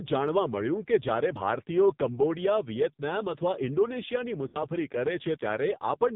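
From start to finish the speech passes through the AMR narrowband mobile codec. Nothing above 4 kHz survives, and the heavy buzzy, synthetic coloring, which fits a low mode near 5.9 kbps, sets it apart from a simple low-pass filter that would muffle the sound without making it artificial.

From 4.48 to 4.58 s come lost AMR speech frames, which fits about three 20 ms frames failing. The decoder stretches the last good pitch and tract shape while fading it, so the sound smears and sinks rather than cutting to silence or clicking.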